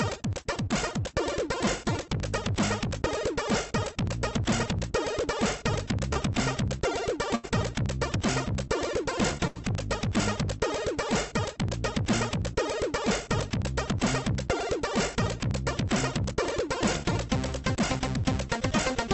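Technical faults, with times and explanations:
6.13 to 6.17 s, short concealed packet loss: about 20 ms of audio never arrived in time, so the receiver extended the preceding sound for roughly 18 ms before blending back into the real signal. The result is a brief smear or wobble in the sound.
7.35 to 7.45 s and 9.47 to 9.57 s, burst of packet loss: each time about 80 ms went missing. The receiver continued the last sound and faded it down, producing a held buzz or fading hiss. The audio then resumes further on, with the gap's content gone.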